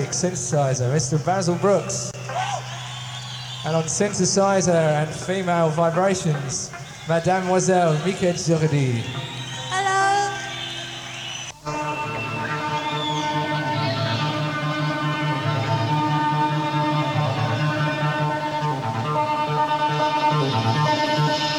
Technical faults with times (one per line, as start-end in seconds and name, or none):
2.11-2.14 gap at a join of encoded pieces